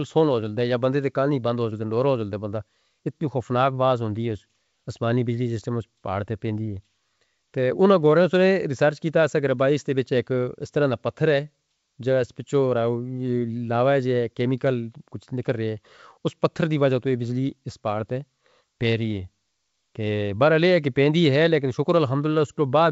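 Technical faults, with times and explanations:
The speech carries the wideband character of G.722 telephone coding, which fits its full 64 kbit/s mode, with coding traces faint at most and no technical fault in the signal.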